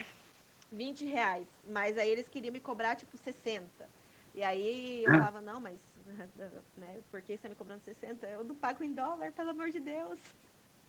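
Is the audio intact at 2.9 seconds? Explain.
Yes, at 2.9 seconds the speech runs through cleanly, with no dropout, click, distortion or other break in the sound.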